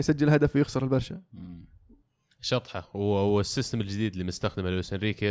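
Nothing in this bit of speech points to a technical fault; there's simply nothing here to flag.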